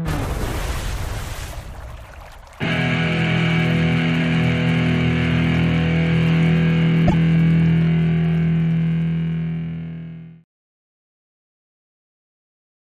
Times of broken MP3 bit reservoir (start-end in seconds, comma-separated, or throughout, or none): 7.07-7.14